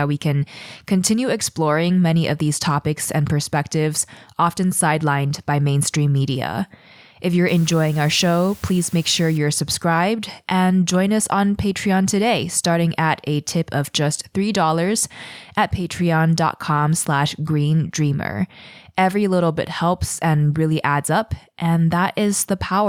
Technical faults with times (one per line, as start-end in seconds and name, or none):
7.48-9.38 low bit depth with dither